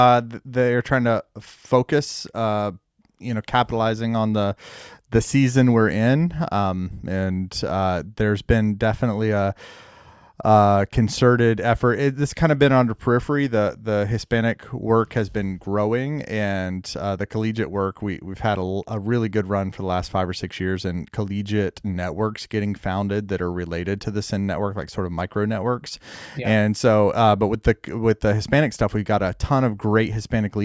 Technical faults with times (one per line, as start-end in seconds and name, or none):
none